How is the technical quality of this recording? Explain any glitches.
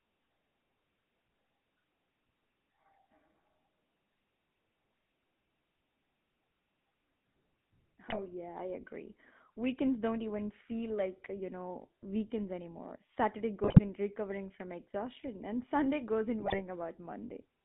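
The recording has two faults: GSM full-rate codec damage throughout, and three short bursts of GSM bit errors.

The GSM full-rate codec colours the whole 18-second clip. The speech is confined to roughly 150 Hz to 3.6 kHz, and the coarse, buzzy roughness fits a 13 kbps full-rate coder. This coder models the vocal tract with a short filter and excites it with a regular pulse train that keeps only a third of the excitation samples. The result is a plainly audible gravelly grain on every syllable, with no high-frequency air and dulled sibilance.

GSM bit errors break up the speech at three points: 8.08 to 8.21 s, just before "yeah I agree"; 13.64 to 13.80 s, just before "in recovering from exhaustion"; and 16.40 to 16.62 s, just after "goes in". Corrupted filter, pitch and gain parameters reached the decoder, so each affected 20 ms frame is rebuilt with a distorted spectrum or wrong level. 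These bursts sound like squawks, pops and gargling, and each lasts about 130 to 220 ms, which points to six or seven damaged frames.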